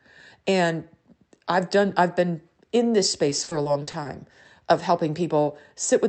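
From 3.29 to 4.07 s the speech breaks into repeated packet loss, with a robotic, choppy quality. Eight short holes, none longer than 40 ms, are patched by stretching the preceding sound, about a quarter of that span. A spectrogram shows smeared, repeated frames and flattened harmonics below the call path's 8 kHz ceiling; the waveform shows abrupt envelope steps.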